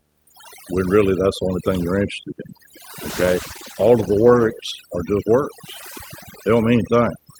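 A video or display buzz runs through the whole speech clip: interference from a screen or video cable is coupled into the audio path. It is heard as a 75 Hz buzz with hash above it, about 15 dB below the speech, and the 75 Hz rate points to the display's field rate.

Overdone noise removal is also present throughout. The noise reduction was set too strong, so it pulls individual frequency bands far down or off whenever they sit near its noise estimate. The background drops away and breaks into twinkling, warbling specks, and quieter parts of the speech are removed along with it.

A call bitrate drop starts at 3.11 s, right after "thing you're interested in". The call's bandwidth estimate fell and the encoder's rate went from 32 to 14 kbps, holding at its lowest for about 1.6 s. The speech is coded more coarsely and loses high frequencies. It clears at 4.81 s, before "are just".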